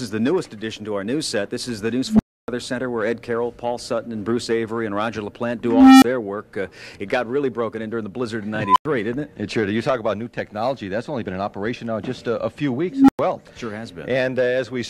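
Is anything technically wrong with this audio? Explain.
Yes, there's an unstable filter blowing up four times. At 2.06, 5.64, 8.63 and 12.90 s, a tone of around 200 Hz, 300 Hz, 1 kHz and 300 Hz swells over 130 to 380 ms, clips, then drops to silence for 23 to 290 ms while the runaway recursive filter overflows and resets.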